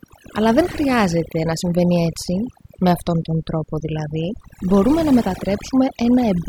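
Overdone noise removal runs through the whole recording: the noise reduction was set too aggressively, so it pushes individual frequency bands down or out wherever they sit near its noise estimate. Quieter parts of the speech are cut along with the noise, leaving a lowered background dotted with twinkling specks.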